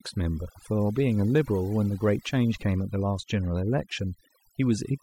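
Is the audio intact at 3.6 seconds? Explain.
No. At 3.6 seconds the speech carries overdone noise removal, and that fault runs through the whole clip rather than starting or stopping there. A noise reduction stage was pushed too hard. Frequency bands close to its noise estimate get pulled far down or switched off. Quiet parts of the voice are cut along with the noise. The background drops and breaks up into twinkling specks.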